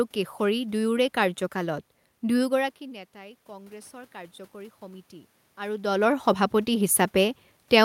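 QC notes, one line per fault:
3.12 to 5.86 s, automatic gain rising: after the talker backs off the mic around 2.5 s and the level drops by about 20 dB, the gain control decides things are too quiet and slowly pulls its gain up by about 6 dB. That's why the voice and the room noise swell together over nearly three seconds. The talker moves again around 5.5 s, just as the ramp finishes.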